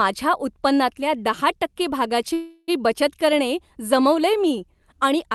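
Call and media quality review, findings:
Call audio freeze, 2.33–2.70 s, after "उत्पन्नातल्या दहा टक्के". Fading buzz or hiss fills about 0.34 s, then a short silence before the audio resumes. Nothing lost; playout delay grows 344 ms. Likely jitter buffer underrun from late packets.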